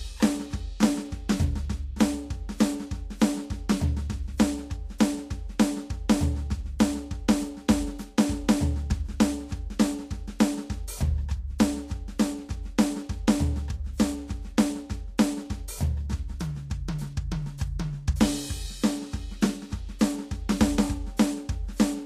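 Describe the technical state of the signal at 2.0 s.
At 2.0 s the music is passing through what is likely Vorbis compression at a low bitrate, present across the whole clip. Nothing remains above 14.2 kHz, and the coarsely quantised treble turns fine detail into grainy hiss, roughening tones and softening attacks.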